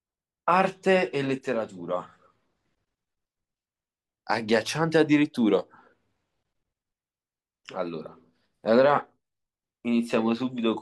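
No technical faults are audible.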